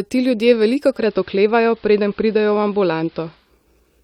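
At 0.85 s the receiver loses its digital signal and cross-faded over roughly 0.29 s to the station's AM broadcast, a case of digital radio blending to analogue. Until it blends back at 3.53 s, the speech loses its upper treble, so consonants turn dull and muffled, a steady hiss sits well beneath the speech, and the level shifts by about 1 dB at each blend.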